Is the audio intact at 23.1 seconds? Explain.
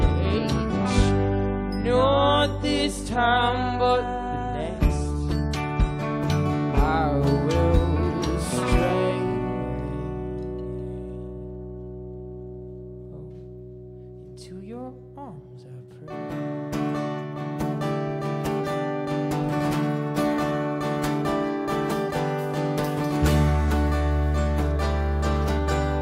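Yes, the audio at 23.1 seconds is intact, with no dropout, click, distortion or other fault at that point.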